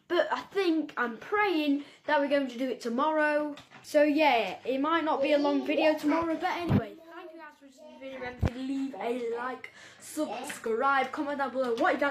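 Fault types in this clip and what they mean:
Overlap between stream segments: Two neighbouring stream segments claim the same stretch of time, and the player discards the overlap. Real audio is lost and the waveform jumps. Here 27 ms vanishes at 6.69 s and 39 ms at 10.67 s, each a tiny skip. Four-second segments fit the spacing.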